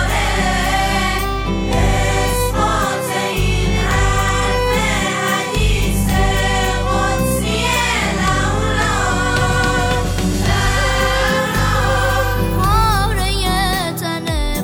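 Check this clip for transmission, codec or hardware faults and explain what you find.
No transmission, codec or hardware faults can be heard anywhere in the clip, and the signal holds steady throughout.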